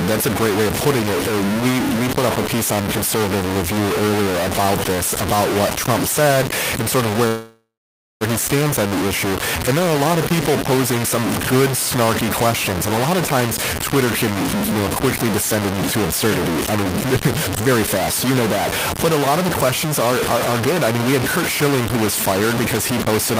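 From start to finish the sound is coarse and grainy, with a harsh distortion that shifts with every syllable and noise about as loud as the speech itself. Quiet passages crumble into grit or sputter between a couple of levels instead of fading smoothly. This is likely low bit depth without dither: the audio appears to have been truncated to about 3 bits with no dither, so the rounding error tracks the signal rather than sitting underneath it as steady hiss.

At 7.27 s the speech stalls. The last sound is drawn out into a buzz that fades, then about 0.54 s of silence follows, and at 8.23 s the speech picks up exactly where it stopped. Nothing is lost, but roughly 0.93 s of delay has been inserted. The likely cause is a call audio freeze: packets were held up in transit, the jitter buffer ran dry, and the receiver filled the wait itself.

From 13.35 s to the end, the speech runs noticeably quicker and sounds slightly rushed, yet the pitch stays where it was. 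This is a jitter buffer speed-up, playing at about 107% of normal speed. The receiver was holding more audio than it aims for, so it shortened the backlog by repeatedly cutting out tiny slices a pitch period or so long, removing roughly 0.7 s in total.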